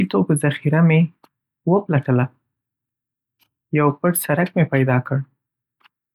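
No technical faults can be heard in the recording, and the signal stays continuous and stable throughout.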